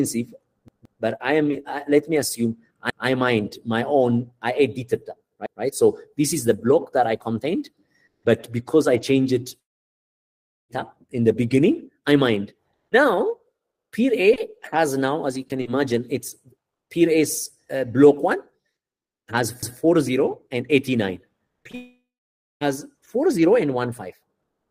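At 0.68, 2.90 and 5.46 s the playback device ran short of fresh audio and replayed its last block, a repeated buffer. Each repeat lasts about 0.17 s, which fits an 8192-sample buffer. The first block sounds three times in a row, the others twice, each with a hard join that gives a brief stutter.

From 9.60 to 10.71 s nothing arrives, most likely because of a long network dropout. About 1.1 s of sound is lost outright. It drops almost straight to silence, and the sound resumes further on with that stretch missing.

At 19.63 s another repeated buffer of the same 0.17 s length plays twice, producing a single stutter.

At 21.64 and 21.71 s, two short concealed packet losses of about 20 ms each leave holes that the receiver patches by extending the preceding sound. Each is heard as a quick smear or wobble before the audio rejoins.

Immediately after, from 21.75 to 22.63 s, what is likely a second long network dropout removes about 0.86 s. 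The receiver first stretches the last sound into a fading buzz for roughly 0.3 s, then leaves silence until the audio returns without the lost portion.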